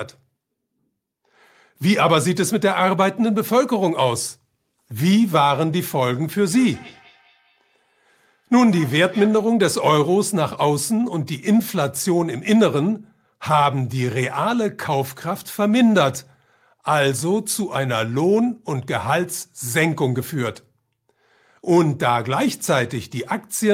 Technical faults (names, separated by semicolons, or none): feedback echo between two devices